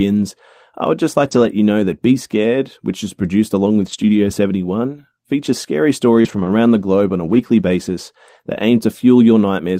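Lost packets were rebuilt from error correction at 1.27–1.45 s and 3.81–4.15 s. Each lost stretch was replaced by the low-bitrate copy carried in the following packet, so there is no gap, but those passages turn rougher and grainier. At 6.21–6.38 s a short concealed packet loss occurs: about 40 ms arrived too late, and about 31 ms was filled by extending the preceding sound, adding roughly 10 ms, giving a brief smeared wobble. Overlapping it, 6.24–6.47 s and later 7.29–7.39 s are again rebuilt from error correction, with the same rough, noisy texture.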